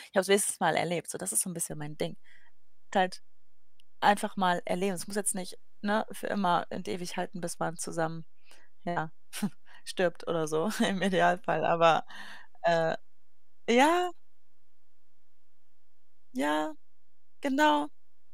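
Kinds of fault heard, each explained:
DC step: At 1.71 s the waveform's zero line jumps to an offset of about -40 dBFS and stays there to the end, so a single low thump marks the shift while the speech itself carries on unchanged.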